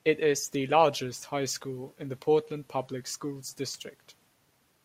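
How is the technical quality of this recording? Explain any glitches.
Nothing in this speech recording stands out as a glitch, so there's nothing to explain.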